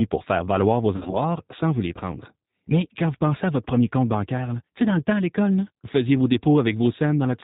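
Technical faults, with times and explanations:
throughout, G.729 codec: The sound is muffled, with nothing above 4 kHz, and has a plainly audible rough, slightly synthetic edge, as if rebuilt rather than recorded. The decoder remodels speech every 10 ms from a vocal tract filter, a pitch predictor and a handful of pulses, so fine detail and breath noise are replaced by approximations. The rough texture fits an 8 kbit/s rate, consistent with the G.729A variant.
0.96–1.17 s, VoIP packet loss concealed by the speech codec: The voice briefly smears into a stretched sound that sags in level, then sounds weak or distorted for a moment as it recovers. Pieces of the stream went missing, about 90 ms in total spread over roughly 160 ms, with the longest gap near 50 ms. The decoder filled each hole by repeating its last pitch and filter at falling gain, and because each frame builds on the one before, the damage carries past the gaps.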